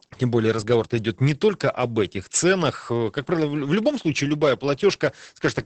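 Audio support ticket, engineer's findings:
Opus voice compression throughout, SILK mode, wideband, fits roughly 10 kbps. Nothing above 8.7 kHz, coarse excitation coding: speech muffled, hoarse, slightly robotic, heavy codec damage.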